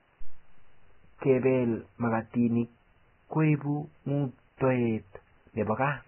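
Throughout the speech, nothing is heard above 3.1 kHz. The treble is replaced by grainy hiss, and consonant attacks blur. The damage is heavy. It points to Vorbis compression, likely at a very low bitrate near 10 kbps, quantising fine detail into noise.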